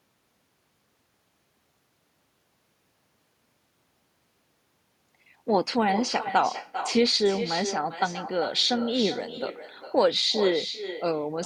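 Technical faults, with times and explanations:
Throughout, echo with no canceller. Each phrase returns roughly 400 ms later, about 10 dB quieter. The far end plays this speech on a loudspeaker. Its microphone picks it up, and nothing removes it. The returning copy sounds thinner.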